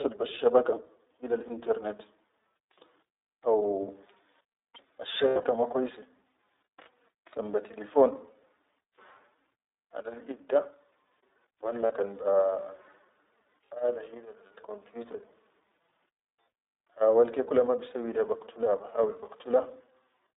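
From start to finish the audio passes through the iLBC codec, with the line band limited to 300 Hz to 3.7 kHz, which fits a 15.2 kbps mode with 20 ms frames. The speech sounds plainly rough and synthetic.

Lost iLBC frames make the decoder repeat a pitch cycle mixed with noise, which sounds like a buzzy, held vowel. This happens at 1.48 to 1.51 s, then in broken patches from 5.28 to 5.45 s before "ma kwaise", then at 11.86 to 11.92 s before "kan be", and finally at 15.12 to 15.15 s. The sound recovers straight away each time.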